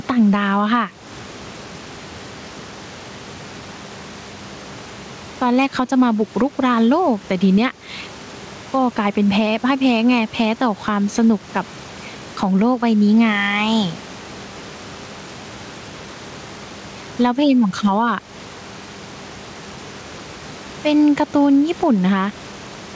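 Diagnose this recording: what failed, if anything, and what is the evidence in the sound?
Gain pumping is present throughout. The gain swings by around 10 dB, pulled down under each loud stretch of speech, so levels sound squashed. Likely cause: input gain set far too high at capture, with a fast limiter pulling down every peak.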